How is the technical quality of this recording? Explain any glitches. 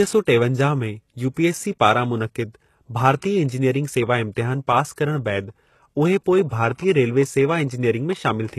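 The recording is heavily codec-damaged throughout, with one short smeared attack.

HE-AAC compression, across the whole clip: the speech was likely encoded with HE-AAC at a very low bitrate, around 16 kbps. Only the lower spectrum is coded; the treble is rebuilt from copied lower bands, so nothing reaches above 12.3 kHz and sibilants sound gritty and metallic.

Pre-echo, at 1.34 to 1.37 s: a sharp onset fell late in a transform block, so quantisation noise sized for the loud attack spread into the quiet gap before it. About 31 ms of hiss precedes the attack, which sounds soft and smeared.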